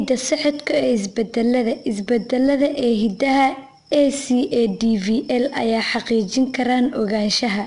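From start to finish the speech carries the sound of 4-bit ADPCM compression. Each sample is coded as a coarse 4-bit step from a predicted value, so the quantisation error rides along as a gritty hiss that rises and falls with the speech level and is plainly audible. Nothing is present above 10.6 kHz, which points to a sample rate around 22 kHz and, at 4 bits per sample, a bitrate near 89 kbps.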